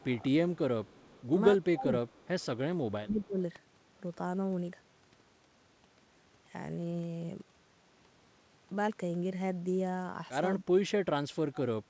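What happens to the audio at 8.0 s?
Nothing goes wrong at 8.0 s: the speech carries straight through, with only the steady band limit of the call path, which has nothing above 8 kHz.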